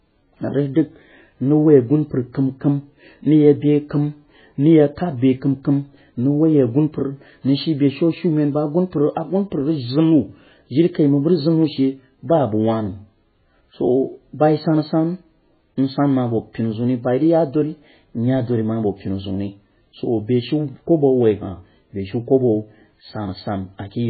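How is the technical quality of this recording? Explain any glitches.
The technical quality is poor, with heavy damage from start to end. The speech sounds muffled and watery throughout. This is likely MP3 compression at a very low bitrate, which fits a stream of around 16 kbps. The encoder had too few bits, so it cut all content above 4.5 kHz. That removes the crispness of s and t sounds. It also dropped weak frequency lines that flicker on and off between frames. That flicker gives the swirly, underwater texture, and consonant onsets come out smeared.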